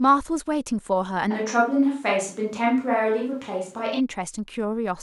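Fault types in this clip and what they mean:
Switch to a distant microphone: From 1.32 to 3.99 s the speech turns suddenly roomy, hollow and thinner. Level stays similar. Faint room noise sits roughly 35 dB below. Likely a farther microphone.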